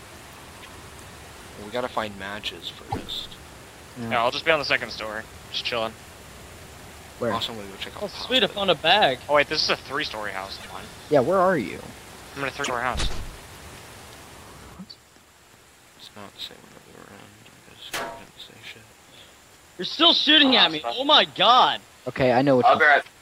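Broken MP3 bit reservoir at 2.89 s and 12.63 s: 70 ms glitches, likely from lost 26.1 ms frames leaving the following frames to borrow the wrong bytes.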